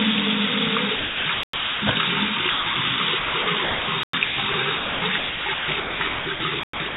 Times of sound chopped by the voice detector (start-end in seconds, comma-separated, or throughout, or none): 0.96-1.82, 2.50-2.76, 3.18-3.88, 4.24-6.96